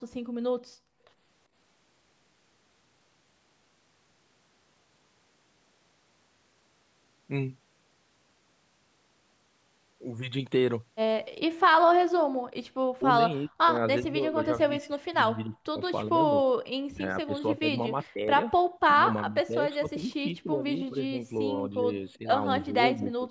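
From 0.0 to 1.16 s the background is gated by the echo canceller, which pulls the microphone down by about 32 dB, so the room sound drops out for around 0.7 s in total.

From 12.96 to 16.35 s, 16.92 to 18.3 s, 18.93 to 22.28 s and 22.69 to 23.3 s the speech dips and breaks up, likely speech suppressed in double talk. The first stretch falls by roughly 40 dB and the later ones by roughly 20 dB.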